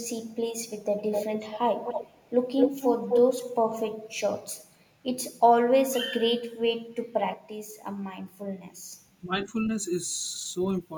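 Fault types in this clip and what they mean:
Echo leak: A delayed copy of the speech returns under the original, most likely because the far side's loudspeaker echo got past its echo canceller and was sent back. A very faint scrap appears at 0.27 to 0.34 s, about 302 ms late and roughly 40 dB down. Louder stretches follow at 0.86 to 1.59 s, 1.85 to 2.33 s and 2.58 to 3.21 s, each about 254 ms behind, ranging from somewhat quieter than the speech to as loud.
Speech suppressed in double talk: The talker's level dips sharply for short moments, likely because the echo canceller could not separate this talker from echo while both sides spoke, and pulled everything down. At 3.38 to 3.45 s the drop reaches roughly 20 dB. At 9.25 to 9.46 s it reaches roughly 10 dB. In each case only around 70 ms of speech is actually attenuated.
Sudden gain jump: At 7.34 s the speech and the background noise both step down together by about 6 dB with no fade. 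They stay at that lower level until 8.93 s, where they jump straight back up. The abrupt, sample-to-sample change likely comes from a digital gain setting being applied without a ramp, which can leave a click at each edge.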